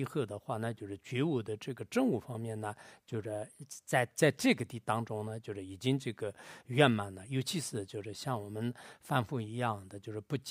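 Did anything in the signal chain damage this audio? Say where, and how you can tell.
Yes. Likely a buffer-stage drift correction step: from 3.24 to 4.11 s the speech runs 5.4% fast and about 91 cents sharp, then snaps back.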